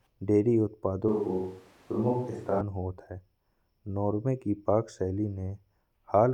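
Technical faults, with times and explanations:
1.08–2.61 s, switch to a distant microphone: the speech abruptly turns hollow, roomy and thin at similar level, likely because a farther microphone briefly replaced the close one.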